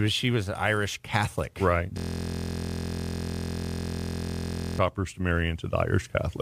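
System hang loop from 1.98 to 4.79 s: the system froze while playback kept repeating one 23.22 ms piece, fitting a 1024-sample buffer, producing a steady 43.1 Hz buzz.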